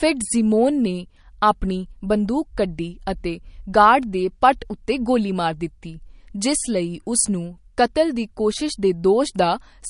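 Speech running the whole clip with plainly audible MP3 compression damage, likely from a low bitrate: nothing sounds above 10.6 kHz, which fits a bitrate around 40 kbps. Unlike a plain low-pass filter, the remaining sound is watery and swirly, with metallic chirps on s sounds and smeared attacks.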